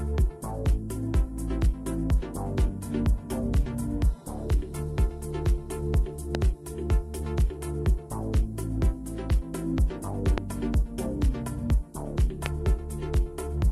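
At 6.35 to 6.37 s there's a loud pop, a single sharp hit sitting maybe 15 dB above the surrounding sound, with the audio carrying on underneath. Another identical one lands at 10.38 to 10.40 s, and a third, hotter at around 20 dB, at 12.46 to 12.48 s. Each is a brief voltage spike riding on the signal, likely from a switch, static discharge or a driver glitch.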